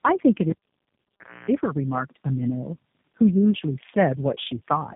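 Throughout, tandem speech coding: repeated low-rate recoding compounds artefacts, giving rough, muffled, warbly speech; spectrogram shows nothing above 3.7 kHz and smeared, blotchy harmonics.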